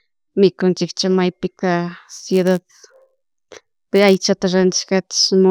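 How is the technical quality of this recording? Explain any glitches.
The recording has one clear glitch. Filter restarted on every block, from 2.07 to 4.17 s, just after "mikunchik chamaypika": the filter drops its memory at each block boundary and starts again from silence, so every block opens with a small click. These clicks repeat at 86.1 Hz, which fits a 512-sample buffer. They form a buzz that rises and falls with the speech level.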